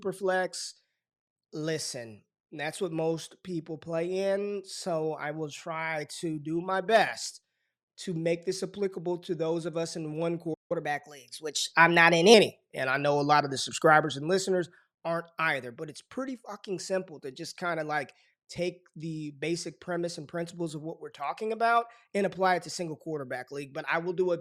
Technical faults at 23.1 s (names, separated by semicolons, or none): none